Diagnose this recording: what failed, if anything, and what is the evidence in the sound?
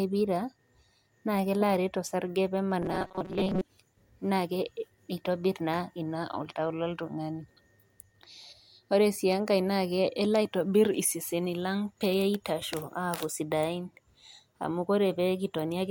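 Right after "osarge pee", from 2.82 to 3.62 s, the speech collapses into a rigid metallic buzz fixed at 188 Hz, loosely following the syllables. This is robotic sound from repeated short buffers, likely at the driver or buffer stage: a starved stream replays 5.3 ms chunks, about half repeated.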